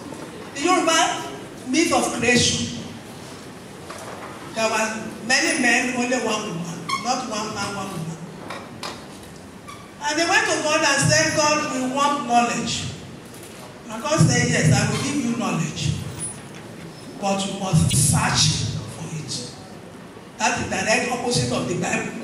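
At 17.90 to 17.94 s there's a corrupt frame decoded: one compressed frame got flipped bits and the decoder played it anyway, so misread gains dump energy in the wrong bands. You hear a short, fairly loud chirp, blip or burst of noise, peaking around -10 dBFS.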